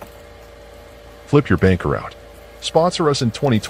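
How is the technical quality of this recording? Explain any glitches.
Nothing stood out as a problem on listening, and there are no glitches to explain.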